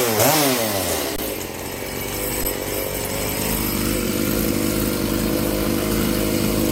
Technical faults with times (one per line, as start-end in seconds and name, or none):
1.16-1.18 underrun with held sample
2.44 underrun with held sample